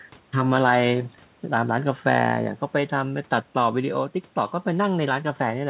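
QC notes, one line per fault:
Nothing to flag on this speech clip; it just sounds like a G.711 mu-law call, with the usual top end stopping at 4 kHz.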